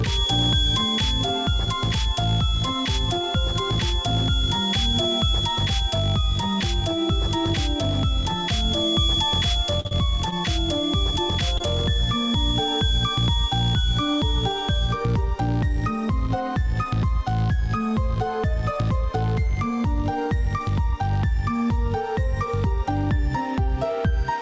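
From the start until about 15.01 s, a thin, steady whistle near 3.4 kHz sits only a little below the sound and wavers slightly in level. This is a feedback whistle, likely from a loudspeaker-to-microphone loop held just short of runaway. Unlike a constant interference tone, its level wobbles, and it never swells into a howl.

Between 9.66 and 10.34 s, repeated packet loss gives a choppy, robotic stretch. About six holes, the longest near 47 ms, are each patched by continuing the previous sound, so roughly a fifth of that span is filler. The holes come close together, so the result sounds mechanical rather than like one isolated glitch.

At 11.58 to 11.62 s, a short concealed packet loss leaves a brief smear or wobble. The decoder bridges a gap of about 20 ms by extending the preceding sound, then blends back into the real audio. Because it is a single event, it passes as a momentary blur rather than a run of metallic chop. 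Across the clip, the call path carries nothing above 8 kHz, which fits a wideband codec such as G.722.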